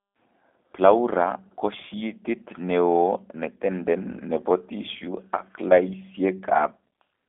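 From start to finish the speech sounds boxy, slightly rough and synthetic. There is no bass below about 300 Hz or air above 3.5 kHz, and nothing above 3.7 kHz at all. This is G.729 codec damage, and plainly audible. The codec rebuilds speech every 10 ms from a vocal tract filter, a pitch predictor and a few coded pulses, at a rate consistent with 8 kbit/s, so fine detail between those pulses is lost.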